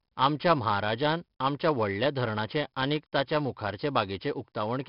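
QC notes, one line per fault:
Throughout, 4-bit ADPCM compression: the speech carries a gritty hiss that rises and falls with its level, because each sample is stored as a coarse 4-bit step from a predicted value. That leaves broadband error riding some 20 to 30 dB under every loud sound, and consonant attacks crunch where the step size can't grow fast enough. The damage is heavy. Nothing survives above 5.3 kHz, so it sounds dull, and the roughly 44 kbps rate fits an 11 kHz sample rate.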